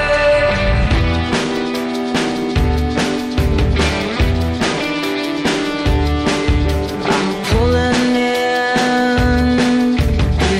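Nothing is technically wrong with the audio.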